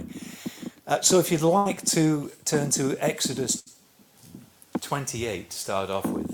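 Two bursts of packet loss occur, at 1.57 to 1.67 s and 3.59 to 3.75 s. Consecutive packets never arrived in time. The receiver stretched the last sound and faded it, heard as a brief held buzz or hiss. Then the audio jumps ahead, about 80 ms and 60 ms missing.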